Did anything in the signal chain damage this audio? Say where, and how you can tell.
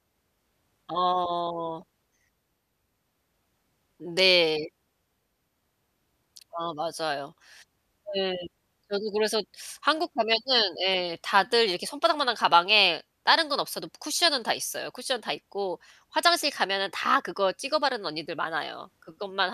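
No, none of the stages between capture and playback left any audible mark on this speech signal, which stays continuous and intact at every point.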